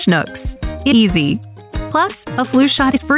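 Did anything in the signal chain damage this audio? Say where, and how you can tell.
Yes. At 0.92 to 0.94 s there is a skip ahead in the network and jitter-buffer stage. Playback jumps forward with no fill, so around 0.7 s of audio is simply gone and the two sides butt together. That distinguishes it from packet loss concealment, which would leave a smeared or synthesised patch.

From 1.04 to 3.11 s the jitter buffer speed-up is at work. The sound runs about 110% fast at unchanged pitch, as the receiver trims pitch-period-sized pieces to drain roughly a fifth of a second of excess delay. A steady pitch rules out a resampling or clock-rate error, which would shift pitch too. Within the call path, nothing is heard above 4 kHz, which fits a narrowband codec such as G.711.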